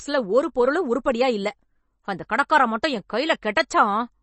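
Throughout, the speech sounds watery and swirly, with nothing above 8.3 kHz, likely MP3 compression at a low bitrate around 32 kbps starving the weaker frequency lines.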